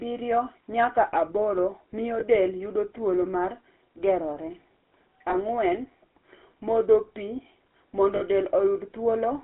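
Speech heard through a GSM full-rate codec for the whole clip: the band runs only from about 250 Hz to 3.4 kHz, and the voice carries a plainly audible buzzy, gravelly roughness, consistent with a 13 kbps rate. A plain telephone band-limit would sound muffled but smooth. The grit here comes from the codec rebuilding the voice from a vocal-tract model excited by sparse, regularly spaced pulses.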